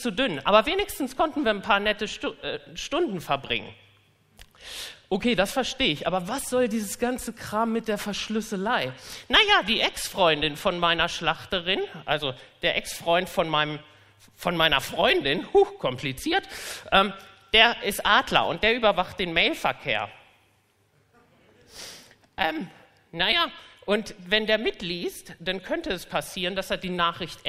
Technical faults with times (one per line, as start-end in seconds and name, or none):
none